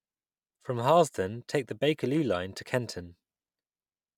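No technical faults are audible anywhere in the speech.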